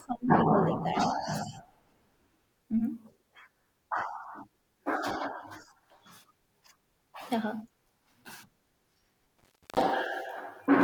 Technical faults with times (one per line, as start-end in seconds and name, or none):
9.39-9.81 intermittent contact